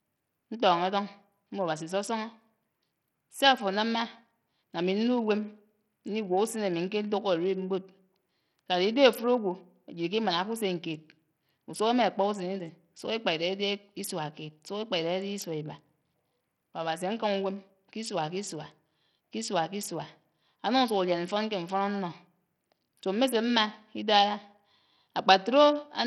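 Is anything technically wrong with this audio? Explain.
Yes. Throughout the speech, heavy codec damage points to likely Bluetooth SBC compression at a starved bit pool, which fits roughly 64 kbps. Coarse sub-band quantisation leaves gritty noise and aliasing on the sound, and the upper bands flicker in and out. Unlike a hearing-model codec's clean treble cut-off, content still reaches about 20.4 kHz, only unstably.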